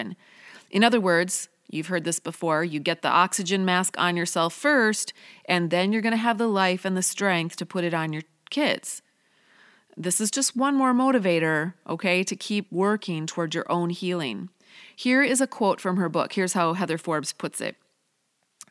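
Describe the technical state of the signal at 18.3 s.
At 18.3 s the speech signal is intact, with no audible technical fault at that moment.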